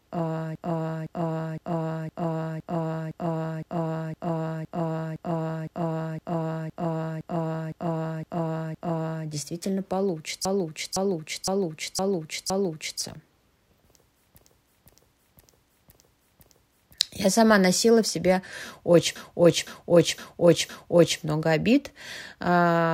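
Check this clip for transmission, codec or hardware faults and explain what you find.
Yes, there are repeated frames: a 512 ms block of speech replays at 0.55–9.26 s (17 extra times), 10.45–13.01 s, 14.38–16.94 s (5 each), and 19.16–21.20 s (4), between "носила в себе очень" and "много обид". Re-sent compressed frames make the decoder play the same stretch again, producing a rhythmic stutter. The repeats add about 16 s.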